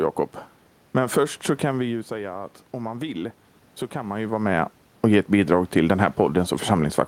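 After "först så kan vi", from 1.83 to 4.4 s, automatic gain rising: the talker moves away, the input drops about 11 dB, and the gain climbs about 4 dB, swelling voice and room noise together.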